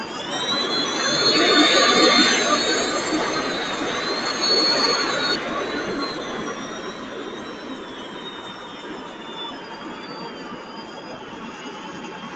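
Noise suppressor applied to music or sounds, throughout: a suppressor tuned for speech stays active for the whole clip and treats sustained tones, ambience and decay as noise. Onsets come through, but held material and tails are pulled down by up to about 5 dB, so the level pumps and flutters and the sound thins out as each event dies away. All of this sits inside an Opus call path that leaves nothing above 8 kHz.

Skip ahead, at 5.35 s: playback jumps forward with no gap and no fill. Roughly a second of audio that was already queued is missing, and the material on either side is butted together almost directly. This is what happens when audio is dropped on the way or by an overflowing jitter buffer. The result is an abrupt splice where the sound lurches from one moment to a later one without any transition, and the delay drops by about the same second.

Jitter buffer speed-up, from 10.32 to 11.54 s: the receiver was holding more audio than its target and trimmed it away by cutting many short pitch-period-sized slices in quick succession, removing around 50 ms in total. 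Playback runs at 104% speed while the pitch stays put, so this stretch runs just short of sounding hurried and any steady pulse loses its even tempo.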